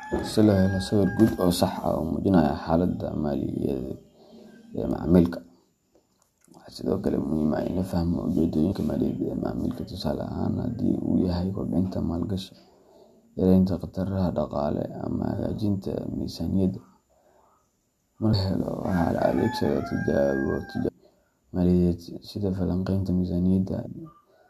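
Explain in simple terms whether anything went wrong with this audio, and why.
Something did go wrong: the speech has four tiny glitches caused by damaged data in a compressed stream. Right after "ah in la fahmo", around 8.71 to 8.73 s, there's a quick glitch, and similar blips turn up at 18.32 s, 20.88 s and 23.85 to 23.87 s. Bits of the compressed file got mangled, so the decoder briefly lost its place and skipped ahead to the next chunk it could read.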